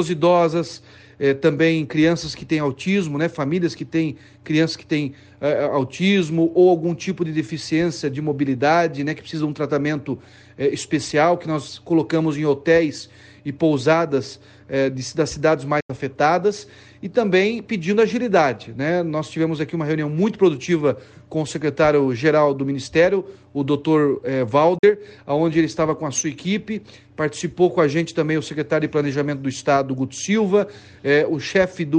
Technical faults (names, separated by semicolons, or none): Bluetooth dropout